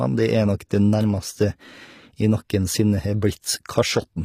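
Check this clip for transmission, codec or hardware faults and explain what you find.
One fault runs through the whole clip: HE-AAC compression damage, plainly audible from start to finish.

Throughout, the speech treble sounds bright but artificial, with s sounds turning gritty and lispy. This is likely HE-AAC coding, which fits a low bitrate of around 24 kbps. Spectral band replication copies lower bands upward rather than coding the treble. A spectrogram shows duplicated, smeared upper bands and nothing above 15.5 kHz.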